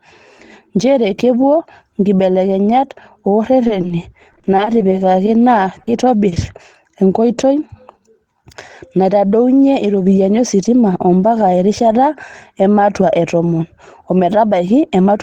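From 3.67 to 5.29 s the speech breaks up with repeated packet loss (robotic sound): 13 gaps, none longer than 40 ms, each patched by extending the preceding sound, so about 15% of that stretch is synthetic. Roughly 180 ms of real speech is gone and 240 ms of fill stands in its place, giving a choppy sound with pieces missing. On a spectrogram the harmonics turn into flat, frozen bands repeated in short blocks, and the waveform shows periodic cycles pasted end to end.

At 5.83 s a short concealed packet loss removes 40 ms. The decoder bridges it by continuing the last sound, then blends back into the real signal, producing a brief smear or wobble.

At 6.29 s a short stall from a late packet holds the current sound for 30 ms while the jitter buffer sits empty. Nothing is lost, but the sound lingers slightly with a faint buzz or dip. In the waveform this appears as a few copied pitch cycles, and on the spectrogram as a stretched, flat slice.

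Immediately after, at 6.34 s, a second short concealed packet loss fills 20 ms with continued sound. It is heard as a tiny smear or wobble, visible as a thin frozen strip.

Right after "naitodounye iropiyiani ositima ombaka", from 11.47 to 11.89 s, a jitter buffer speed-up trims about 40 ms of accumulated delay by cutting out individual pitch periods. The speech runs at about 108% speed with its pitch unchanged and sounds slightly hurried. On a spectrogram the harmonics keep their spacing while the syllables are compressed, and in the waveform the cycles join without audible gaps.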